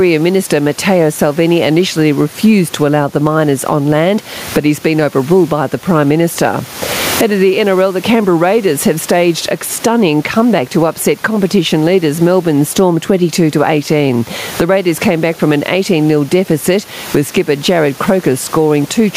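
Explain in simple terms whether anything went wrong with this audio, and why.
Yes, there's gain pumping all the way through: the sound is squashed, with loud and soft parts ending up closer in level, likely from a limiter clamping down on overly high mic gain.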